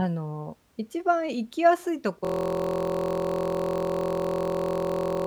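At 2.25 s a system hang loop kicks in and runs to the end. A 23 ms slice, which fits a 1024-sample buffer, repeats into a steady 43 Hz buzz.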